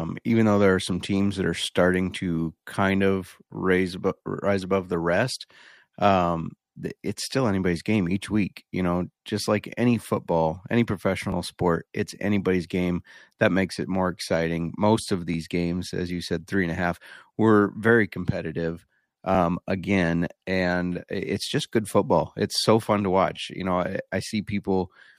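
Overlapping chunks at 3.30, 7.31, 11.32, 15.34 and 23.36 s: the audio was handled in 4-second blocks, each starting about 13 ms early, so that sliver replays as a brief click or stutter, first between "are starting to kind" and "raise above rise above".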